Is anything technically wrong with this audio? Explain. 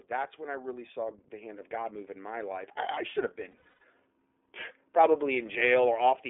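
Yes, there are three faults: narrowband codec coloration throughout, a gain swell at the start, and a burst of lost frames near the middle.

Throughout, the speech carries iLBC codec damage. The line passes only about 300 Hz to 3.5 kHz, so sibilants and airiness are gone. iLBC codes the excitation of each frame independently, and the texture fits its 30 ms frame mode at about 13.33 kbps. The effect is plainly audible as a slightly rough, synthetic edge on the voice.

From 0.12 to 2.07 s there is automatic gain rising. The gain control judged the input too quiet and raised its gain gradually, by about 8 dB, over nearly two seconds. Voice and background swell together rather than the voice alone getting louder, and the level settles by the time "in my life I" is spoken.

From 3.51 to 3.81 s, right after "I I should have", there are lost iLBC frames. About 240 ms of audio is missing, scattered across 300 ms, which points to roughly eight 30 ms frames. 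The longest continuous gap is around a tenth of a second. The decoder conceals each loss by repeating the last pitch cycle mixed with noise, so the gaps sound like a held, slightly buzzy vowel. Because iLBC frames stand alone, the voice returns cleanly almost immediately after each one.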